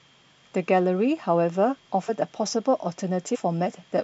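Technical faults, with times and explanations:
2.08 s and 3.34–3.36 s, compressed frames skipped: the speech jumps ahead twice, losing around 50 ms and then around 70 ms, which fits a couple of whole codec frames, then a few, going missing.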